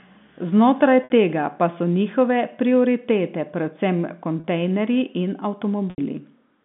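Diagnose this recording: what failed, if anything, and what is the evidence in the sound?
Network packet loss with pitch repetition at 1.04, 4.4 and 5.9 s (60, 40, 80 ms): the waveform shows identical repeated cycles fading out, and the spectrogram shows frozen, held harmonics.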